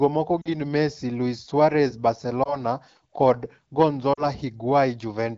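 Radio errors corrupted frames of the AMR-WB stream, so the decoder concealed them by repeating its last good pitch and vocal tract settings at falling gain. These lost AMR speech frames make brief warbling dips at 0.41–0.48 s, 2.43–2.60 s and 4.13–4.25 s, each fitting one or two lost 20 ms frames.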